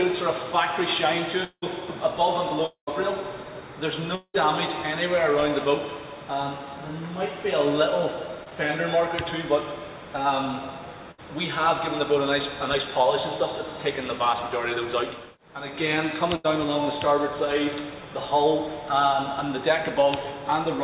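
Long network dropouts occur at 1.44, 2.66 and 4.15 s, each about 0.2 s. The last sound stretches into a fading buzz or hiss, falls silent briefly, then returns with a chunk missing, likely from audio failing to arrive.

Short concealed packet loss at 8.44 s hides about 20 ms: the receiver extends the preceding sound, leaving a brief smear before blending back.

Bursts of packet loss at 11.11 and 16.36 s drop about 60 and 80 ms. The continued sound fades as a held buzz or hiss, then the audio jumps ahead. Throughout, the band stops at 4 kHz, which fits a 64 kbps G.711 A-law call path.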